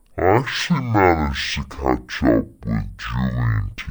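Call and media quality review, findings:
Stereo read as mono, whole clip. Speech plays at half speed, a full octave down, with a faint mirrored copy up in the top half of the spectrum. Probable component: decoder or capture path ignoring the channel count. Interleaved left/right samples are treated as one channel, so every stereo pair stretches into two consecutive mono samples. Check the channel flag on the stream header first.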